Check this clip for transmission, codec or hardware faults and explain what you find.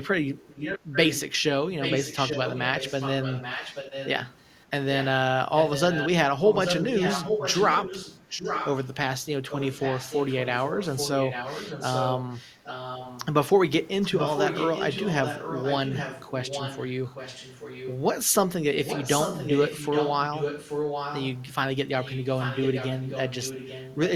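An echo leak runs through nearly the whole speech clip: a second copy of the speech trails about 0.83 s behind the original, about 5 dB quieter than it. It appears from 0.04 to 1.21 s, 1.81 to 8.88 s, 9.5 to 13.26 s, 14.01 to 17.95 s, 18.84 to 21.44 s and 22.01 to 24.12 s. The copy is weaker, around 10 dB down, in the 9.5 s and 22.01 s stretches. Its likely cause is a far-end loudspeaker whose echo canceller let its microphone pickup return.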